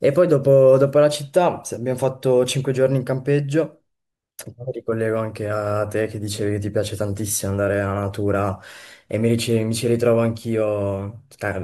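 No technical faults can be heard anywhere in the recording. At no point does the sound reveal a moment where the audio chain went wrong.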